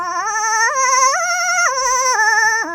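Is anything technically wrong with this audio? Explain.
Yes, the whole music clip has been read two samples at a time, so it plays at double speed. Whatever read the file treated each pair of samples as a single frame, as if the data were two channels or samples twice as wide. It gets through the material twice as fast, which pushes everything up 12 semitones, a full octave, and gives the music that sped-up, chipmunk feel.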